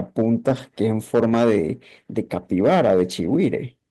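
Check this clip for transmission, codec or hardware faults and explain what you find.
Two faults are audible: hard clipping across the whole speech clip, and a short stretch of speech rebuilt from error-correction data near the start.

Hard clipping runs throughout. The signal is driven about 8 dB past what some stage in the chain can pass, so the loudest peaks are sheared flat at that ceiling. Only a small share of samples reach the limit, but each flattened peak adds harmonics high in the spectrum. The result is a crackly, gritty edge on the louder syllables.

A lost packet rebuilt from error correction occurs between 0.49 and 0.59 s. Packets in this span went missing, and the decoder filled the gap with the low-bitrate backup copies carried in the packets that followed. Because of that, the audio never drops out. Instead, about 60 ms of speech, consistent with three 20 ms packets, comes through rougher and noisier than its surroundings. 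It is a brief grainy patch rather than a silence or a click.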